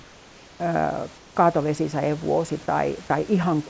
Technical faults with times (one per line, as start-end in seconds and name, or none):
0.00-0.60 comfort noise in place of the background
1.18-1.36 comfort noise in place of the background